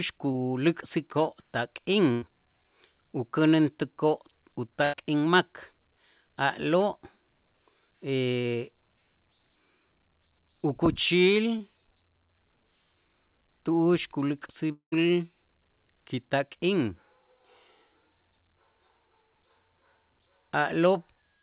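At 0.32 s there is a short concealed packet loss. About 20 ms of speech never arrived in time. The receiver extended the preceding sound to cover the hole, then blended back into the real signal. It is heard as a brief smear or wobble. The same fault returns at 11.58 s, again about 20 ms long.

From 2.12 to 2.24 s comes a burst of packet loss. About 100 ms went missing in a row. The decoder held the last sound and let it fade across the gap. A voiced stretch turns into a held buzz, and other sounds into a dying hiss. Speech then picks up further on, with that stretch gone. A second burst runs from 4.84 to 4.97 s, also about 100 ms lost. Here the resumed audio arrives about 11 ms late, so the gap is stretched slightly.

From 14.72 to 14.94 s, 200 ms of speech is missing. The last sound is carried on and fades out. Then about 110 ms of silence follows before speech returns further on. This is likely a long network dropout. 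The concealment gives up and leaves a hole.

Throughout, the G.711 A-law call path leaves nothing above 4 kHz, which gives the narrow telephone sound.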